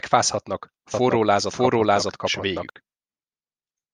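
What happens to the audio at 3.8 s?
At 3.8 s the speech continues intact, with no dropout, click, distortion or other fault at that moment.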